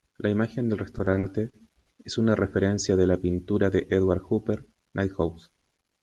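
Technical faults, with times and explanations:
0.91–1.88 s, repeated stalls (stutter): right after "imagen del", packets kept arriving late, so the jitter buffer ran dry seven times. The receiver stretched the last sound across about 190 ms in total, with gaps up to 70 ms, so the passage drags and stutters before "es una referencia de".
3.11–3.52 s, jitter buffer slow-down: just after "es una referencia de", the buffer was short of reserve, so the receiver repeated pitch periods and pause fragments, adding 55 ms. The sound runs at 89% speed with unchanged pitch and drawn-out sounds.
5.50–6.01 s, jitter buffer speed-up: the buffer held more audio than its target, so the receiver cut out short pitch-period pieces, roughly 70 ms in all. The sound plays at 112% speed at the same pitch and comes across as hurried.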